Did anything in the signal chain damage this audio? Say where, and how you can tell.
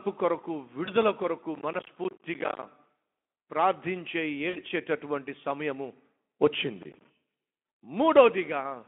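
Yes. At the network and codec stage there is VoIP packet loss concealed by the speech codec, at 0.85 to 0.91 s and again at 4.49 to 4.59 s. The first sounds like one lost 20 ms frame and the second like a run of three, about 60 ms. The decoder filled each gap by extrapolating from its last pitch and filter state and lowering the gain frame by frame. A spectrogram shows frozen, smeared harmonics that fade out. The waveform shows repeated pitch periods under a falling envelope.

At the driver or buffer stage there is processor overload crackle, from 1.55 to 2.63 s and from 6.83 to 7.05 s. The processor missed buffer deadlines over and over, and each missed buffer was replaced with silence. The gaps point to a buffer of roughly 10 ms, with about fifty misses in the first burst and around seven in the second. They sit on top of the Speex-coded, 250 to 3400 Hz line sound as gritty tearing. A waveform shows short flat dropouts with hard edges. 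A spectrogram shows dense vertical broadband stripes.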